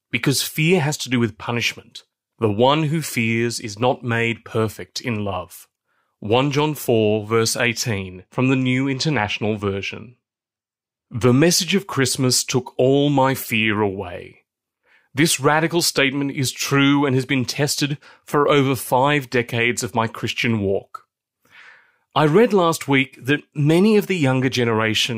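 Channel delay (comb filtering) affects this speech clip from 7.98 to 11.28 s, ending just before "message of": one channel lags by about two samples, and mono summing notches the highs from around 10 kHz, dulling the sound.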